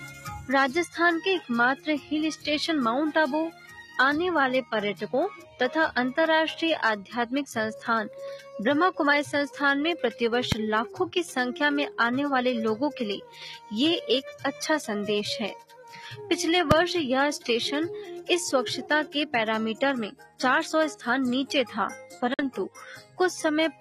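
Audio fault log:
throughout: noise suppressor applied to music or sounds. A speech-tuned suppressor stays on, treating steady parts as noise, so the level swings by around 5 dB and the sound pumps.
0.1–0.26, 1.76–2.11, 3.51–3.96, 5.37–5.6, 15.63–15.85, 20.15–20.39, 23.01–23.2 s: sound cut by the noise suppressor. Sustained stretches get mistaken for noise and dip by about 7 to 12 dB, deepest at 15.6 and 20.2 s.
10.52 and 16.71 s: invalid numbers at full scale. A 2.67 ms block, which fits a 128-sample buffer, slams to one extreme value far beyond the audio's peaks, so each lands as a single sharp bang.
22.34–22.43 s: Bluetooth dropout. A 46 ms hole, likely from about three late wireless packets, then the sound picks up further along as if it had kept playing.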